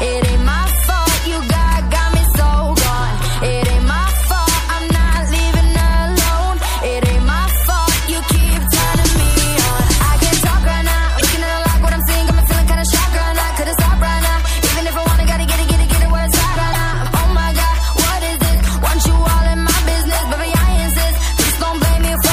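Throughout, the audio has a watery, swirling texture on high-frequency content and smeared attacks, which likely comes from MP3 compression at a low bitrate; the plainly audible damage fits around 64 kbps, where the encoder cuts treble and drops weak spectral lines. At 11.17 to 11.21 s and again at 16.71 to 16.75 s, a short glitch marks damaged data in the compressed stream, where the decoder misread frames and resynchronised on the next header.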